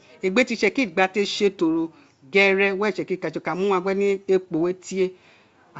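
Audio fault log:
Nothing to log here: the speech comes over G.722 wideband telephone coding at 64 kbit/s, which carries it up to around 7 kHz with at most a faint trace of the coding.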